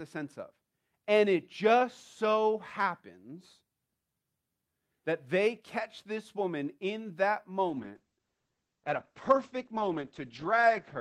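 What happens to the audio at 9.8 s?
At 9.8 s you're in the middle of a call bitrate drop that starts at 7.7 s, right after "this woman in that", and runs to the end of the clip. The bandwidth estimate fell, so the encoder went from about 48 kbps down to 9 kbps and cut its audio bandwidth from 20 kHz to 8 kHz. The speech sounds muffled and a bit watery or rough, and it never recovers before the clip ends.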